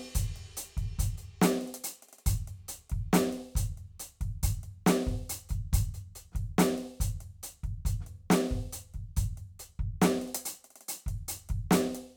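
Nothing goes wrong anywhere in this piece of music, so there's no fault to point to at any moment.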